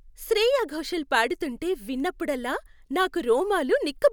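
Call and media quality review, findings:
Speech reviewed; no audible faults found.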